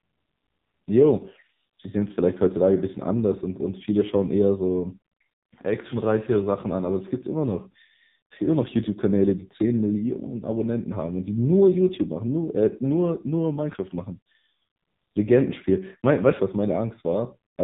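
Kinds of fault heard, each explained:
AMR narrowband mobile codec: The speech sounds muffled and boxed-in, with nothing above 4 kHz, and it carries a heavy buzzy, synthetic edge throughout. This is the AMR-NB mobile codec at work: it samples at 8 kHz and rebuilds the voice from a vocal-tract model excited by a few pulses per short subframe. The damage here is severe enough to suggest one of its lowest modes, around 6 kbps.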